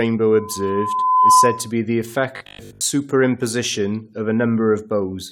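Speech with two faults. From 0.32 to 1.71 s, loudspeaker feedback squeal: a single 1 kHz tone swells over roughly a second to about 10 dB above the voice, and that growth distinguishes it from a steady interfering tone. From 2.37 to 2.81 s, the voice turns into a rigid 50 Hz robotic buzz, likely from repeated short buffers (about 20 ms), with most of the audio replaced. Unlike mains hum, it loosely tracks the words rather than sitting beneath them.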